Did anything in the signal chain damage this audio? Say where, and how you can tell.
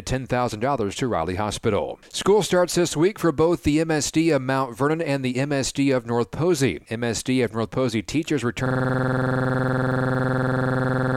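Yes. At the driver or buffer stage, a system hang loop starts at 8.66 s and runs to the end. A 46 ms slice repeats about 54 times at 21.5 Hz, giving a machine-gun stutter. The system stalled while the hardware kept replaying its ring buffer, consistent with a 2048-sample buffer.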